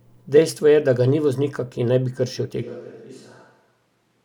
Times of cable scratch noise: none

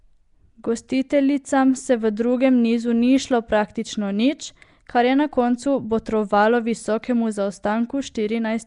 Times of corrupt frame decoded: none

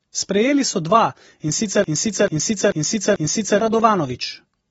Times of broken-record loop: 1.84-3.60

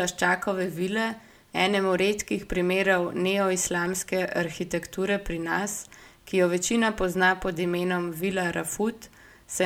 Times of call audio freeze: none

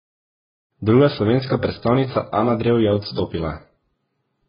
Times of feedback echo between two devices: none

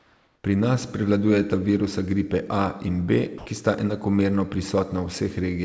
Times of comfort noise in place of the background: 0.00-0.44

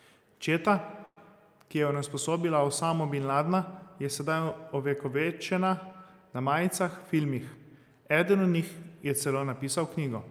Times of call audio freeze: 1.05-1.18

